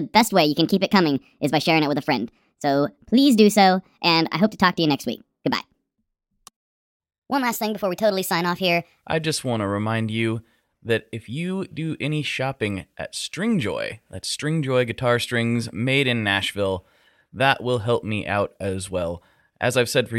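A likely clock mismatch plays the opening section, from 0 to 9.02 s, at the wrong speed, 1.37 times too fast. The speech hurries along and sits about five semitones high, then returns to natural pace and pitch just before "I just want to".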